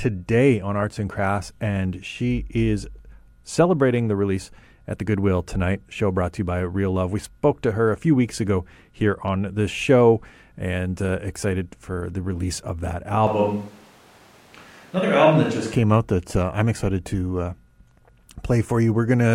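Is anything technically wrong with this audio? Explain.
Yes. From 13.27 to 15.73 s, right after "the release of that", the speech suddenly turns roomy and hollow with thinner bass, then snaps back before "came out that uh". That's a switch to a distant microphone, likely because the close mic dropped out. Level barely changes, but room noise sits roughly 30 dB under the speech.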